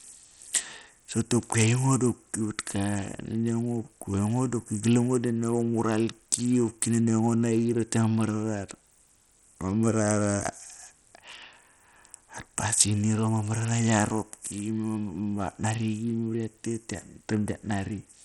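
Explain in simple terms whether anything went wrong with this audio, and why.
Something went wrong across the whole clip. The speech sounds gritty and dull. Nothing remains above 12 kHz, and a rough noise rides along. This is likely Bluetooth SBC compression. That simple codec was squeezed hard, so the high sounds lost their data.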